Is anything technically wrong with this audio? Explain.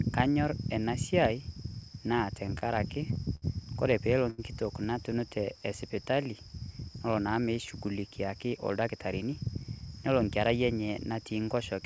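Yes. The speech passes through a call path with a wideband codec that fits G.722, so nothing is heard above 8 kHz, and four jitter buffer faults are audible along the way.

From 2.16 to 3.44 s there are repeated stalls (stutter). Packets kept arriving behind schedule, and the jitter buffer emptied six times. Each time, the receiver held the last sound going until data came in again. About 132 ms in total was filled this way, roughly a tenth of that span, and the longest hold was 67 ms. Nothing is lost, but the speech drags and catches in small, uneven hitches.

At 4.30 to 4.40 s there is a short stall from a late packet. One packet missed its playout time, and the buffer ran dry. The receiver stretched the preceding sound for 80 ms, then resumed where it had left off, and the playout delay rose by the same 80 ms. The result is a single sound held too long, with a faint buzzy or dipped quality during the hold.

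From 5.29 to 6.13 s there is a jitter buffer slow-down. With its reserve low, the buffer rebuilt headroom by repeating individual pitch periods and slivers of pause many times over, adding 60 ms. Playback runs at about 94% speed while the pitch stays unchanged. Sounds come out slightly drawn out.

From 8.08 to 9.65 s there is a jitter buffer speed-up. The buffer had collected more audio than its target, so it trimmed short pieces of one or a few pitch periods in succession, removing about 150 ms. Playback runs at about 107% speed with the pitch unchanged. This stretch sounds hurried, as if the talker briefly rushes, and the rhythm is tighter than in the surrounding speech.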